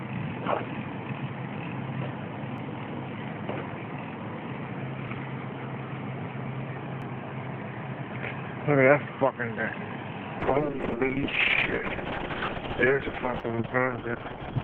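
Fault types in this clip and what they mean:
Dropped buffer (overrun): The audio skips ahead at 2.58 s, then again at 5.08 s and 7.02 s. No gap of silence is heard. The sound on either side of each spot is simply butted together. The first jump loses roughly 10 ms, and the later two about 30 ms each. The likely cause is a buffer that was not read in time, overwritten before collection.
Call bitrate drop: From 10.42 s to the end, the sound becomes coarse and muffled. The encoder's rate falls from 128 kbps to 6 kbps and stays at that floor for about 4.2 s without recovering. At such a low rate, detail is quantised roughly. The audio bandwidth also shrinks from 20 kHz to 6 kHz, so the top end disappears and everything sounds dull.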